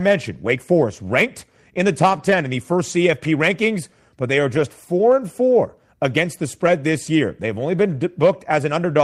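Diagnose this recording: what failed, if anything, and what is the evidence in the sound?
Three short rough, noisy patches in the speech, with no dropout, at 2.09–2.35 s, 4.55–4.61 s and 6.65 s: lost packets rebuilt from error correction, a network fault. The decoder played low-bitrate copies carried in later packets, consistent with several, two and one lost 20 ms frames.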